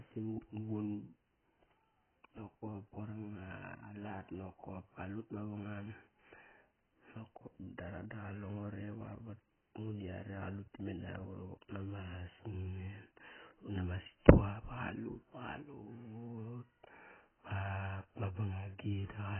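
Throughout, the speech sounds dull and smeared, with fizzy warbling on sibilants and nothing above 3.1 kHz. A spectrogram shows a hard ceiling there and patchy holes below. This is likely heavy AAC compression, which fits a bitrate near 12 kbps.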